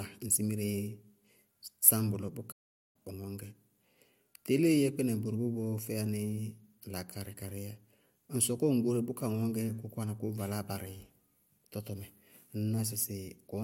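At 2.51 s, right after "sáñ bʋlɔ", the speech cuts out dead and stays silent until 2.96 s, a gap of about 0.43 s. That's a playback stall, likely the player running dry of data or its thread getting blocked before picking back up.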